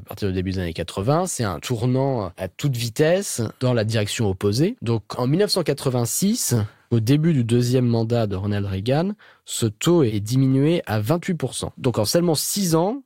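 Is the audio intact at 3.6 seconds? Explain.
No, not quite. At 3.60 s there's a single sharp click in the speech, which is most likely dropped samples: a tiny fraction of a millisecond goes missing, so the waveform jumps straight to a later value. Nothing audible is lost, just that abrupt tick.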